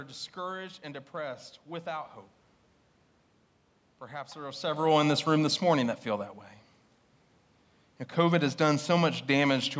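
Speech over call microphone processing with nothing above 8 kHz, room noise underneath and a level shift around 4.5 s where the talker moves relative to the microphone, but no technical fault to report.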